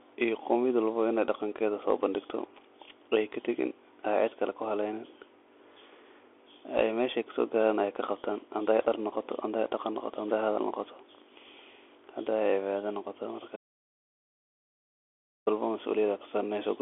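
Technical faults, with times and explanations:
Throughout: Bluetooth CVSD headset codec. Speech sits within about 150 Hz to 3.4 kHz, with nothing above 3.8 kHz, over a granular hiss, and s sounds turn scratchy where the adapting one-bit step cannot track loud high content. That grain, not just the narrow band, separates it from plain telephone filtering.
13.56 to 15.47 s: audio dropout to a faint residue. Speech cuts off abruptly for about 1.9 s, leaving only faint mains hum, then returns mid-flow. Hum rather than silence, and the hard edges, point to a likely lost input with the later path still live, not a pause.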